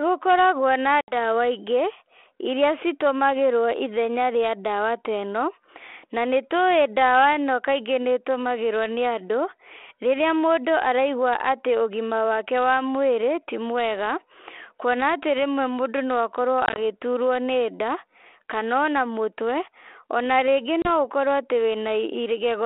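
Packet loss on an ADPCM call shows up three times in this speech. At 1.01 to 1.15 s about 70 ms drops out as a hard-edged silent hole. At 16.66 to 16.78 s about 60 ms goes missing in short gaps of up to 20 ms, scattered over roughly 100 ms. At 20.82 to 20.9 s a 30 ms hole follows. The decoder's predictor and step size lose track of the sender's, so the speech comes back slightly distorted before settling. The G.726 line at 32 kbit/s is band-limited to 300 Hz to 3.4 kHz.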